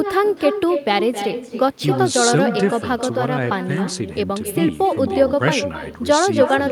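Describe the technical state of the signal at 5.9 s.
At 5.9 s the speech carries echo with no canceller, as it does through the whole clip. The far end is playing the call over a loudspeaker. Its microphone picks that sound up, and nothing removes it before it returns. Each syllable is followed roughly 300 ms later by a second copy. That copy sits about 8 dB below the direct speech. It sounds thinner, like a quieter shadow trailing the talker.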